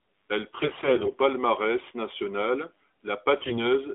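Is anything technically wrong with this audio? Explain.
Yes, there are AMR bit errors, in two bursts: from about 0.60 to 1.15 s, and again from 3.42 to 3.58 s. On a lossy radio link, the less protected bits in the AMR frames got flipped while the checks on the critical bits still passed. The decoder then mislocated its excitation pulses and misread the fine pitch, gain and spectral values. Pitch and level stay roughly intact, but both stretches turn hoarse, scratchy and gargly, with the second, shorter burst a bit rougher. Underneath, the narrowband AMR coding itself is fine, sounding like the higher-rate mode, with the usual phone band.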